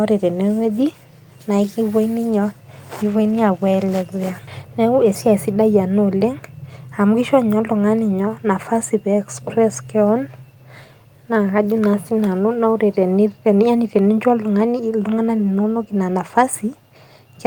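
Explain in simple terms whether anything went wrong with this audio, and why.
Two things go wrong in this speech, both right around the 4.5-second mark.

At 4.47 to 4.49 s there's a skip ahead. About a second of speech was thrown away, either lost on the way or dropped by the receiver's buffer, and playback jumps straight to the later audio with no gap or filler to cover it.

Then from 4.65 to 5.63 s there's a jitter buffer speed-up. The receiver was holding more audio than it wanted, so it trimmed out tiny slices, about 70 ms in total. That part plays roughly 6% faster at the same pitch and sounds a little rushed.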